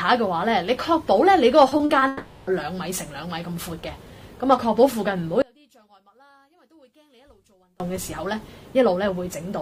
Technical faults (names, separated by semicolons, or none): repeated packet loss (robotic sound); long network dropout; one channel inverted